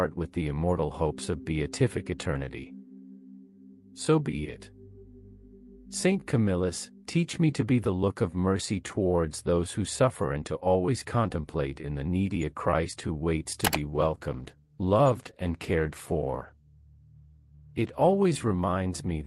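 At 13.63 s a call bitrate drop sets in and lasts until 18.27 s. The sound suddenly turns coarser and more muffled, with a rough, watery texture, consistent with the encoder falling from around 48 kbps to around 16 kbps. The connection's bandwidth estimate fell, so the encoder had to spend far fewer bits, quantising more crudely and discarding upper frequencies. On a spectrogram the high band is abruptly cut off across that stretch, leaving a flat ceiling, before the full bandwidth returns.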